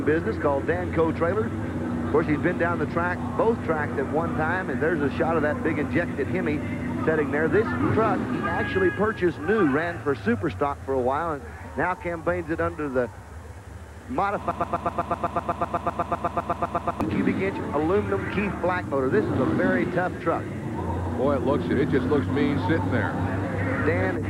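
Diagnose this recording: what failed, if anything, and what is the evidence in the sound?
A broken-record loop runs from 14.51 s to 17.01 s. A fragment of about 0.13 s (126 ms) repeats exactly, back to back, 20 times, so the sound stutters mechanically for roughly 2.5 s before normal audio resumes. The stage is likely a buffer stall in playback or streaming: the pipeline stopped receiving new data and kept re-sending the last block it held. Whatever should have played during those 2.5 s is missing.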